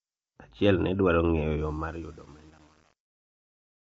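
Low-delay AAC compression runs throughout this speech: the voice sounds rough and grainy, with noise filling the gaps between harmonics and nothing above 7.7 kHz. The likely cause is AAC-ELD's short frames, which resolve pitch harmonics poorly, at a rate that points to about 24 kbps.

Truncation distortion on a fade begins at 1.6 s, as the fade-out gets quieter, and is worst from 1.73 s to the end. The fade stage keeps only about 8 bits without dither, so the waveform collapses into coarse steps and the tail turns gritty.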